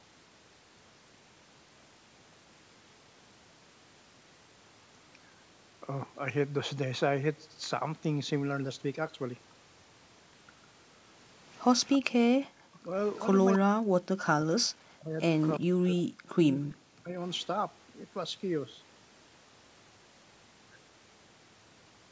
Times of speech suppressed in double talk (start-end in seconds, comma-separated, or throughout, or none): 12.57-12.94, 13.62-15.19, 15.59-17.15